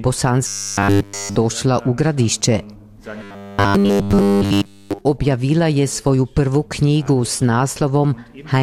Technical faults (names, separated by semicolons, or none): robotic sound from repeated short buffers